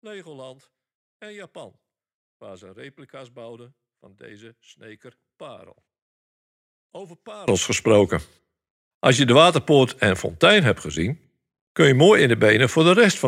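From the start to 7.48 s the speech collapses to a faint residue, roughly 26 dB down, with the centred voice and low end almost gone. The likely cause is one channel inverted: with one stereo side in reversed polarity, the identical centre content cancels when the two sides are summed to mono, leaving only the small differences between them. At 7.48 s the full-bodied voice returns abruptly.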